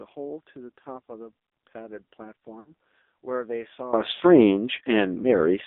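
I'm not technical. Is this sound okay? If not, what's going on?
No. The speech went through the AMR narrowband mobile codec, squeezed hard into a thin phone channel, so it sounds muffled, buzzy and artificial throughout.

There are also lost AMR speech frames. Radio errors twice wiped out bits of speech, so the phone stretched and faded the previous sound to cover the gaps: a brief warble at about 2.6 to 2.7 s and again at about 4.14 to 4.23 s.

Finally there is a sudden gain jump at 3.93 s. The volume most likely got switched up in one step instead of gradually, so from there to the end everything is much louder, background included.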